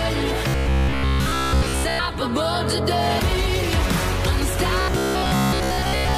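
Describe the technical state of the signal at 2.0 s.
Right around 2.0 s you're at the tail of the robotic sound from repeated short buffers, which runs from 0.48 to 1.99 s. It's a rigid, metallic buzz at 66.7 Hz, likely from a roughly 15 ms chunk being looped over most of the stretch while the real audio gets skipped.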